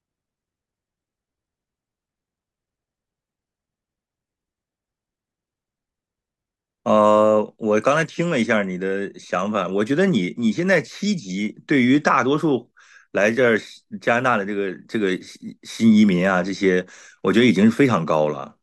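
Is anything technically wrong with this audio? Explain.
No, nothing technically wrong can be heard in this speech recording.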